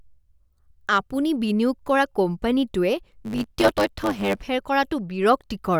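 A speech recording carries a block size mismatch (truncated) from 3.21 s to 4.46 s. Over that stretch a buzz at 100 Hz appears, matching the rate at which block endings are discarded. One processing stage is emitting longer blocks than the following stage accepts, so the tail of every block is lost. Because material is dropped on each cycle, the speech plays about 1.09 times faster while its timbre stays the same.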